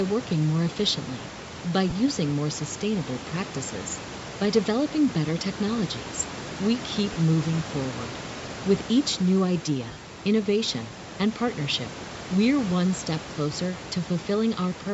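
A speech recording with a breathy, grainy edge on every syllable, where the upper spectrum sounds noise-filled rather than swirly or warbling. That points to Bluetooth LC3 compression as the likely cause, and the plainly audible damage fits a moderate bitrate of around 48 kbps. Nothing is heard above 8 kHz, and room noise sits about 15 dB under the voice. There are also short breaks from lost LE Audio frames at 1.90–1.93 s, 7.13–7.16 s and 13.78 s, plus a scattered cluster between 9.89 and 10.01 s with a longest gap of roughly 40 ms. Instead of a silent dropout or a click, each gap is filled with a brief noisy smear of the preceding sound, because the decoder repeats the last spectrum with scrambled phases. The gap lengths suggest ten-millisecond frames.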